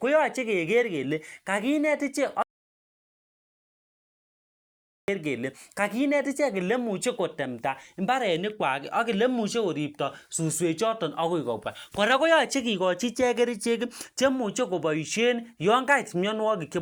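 Speech recording with an audio dropout to silence from 2.43 to 5.08 s: about 2.66 s of silence with no room tone, likely from lost input.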